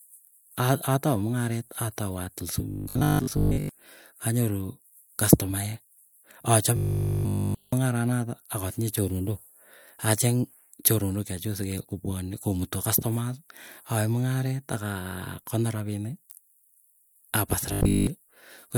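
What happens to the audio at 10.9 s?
Nothing goes wrong at 10.9 s; the speech runs through that moment intact, with no dropout, click or other fault to be heard.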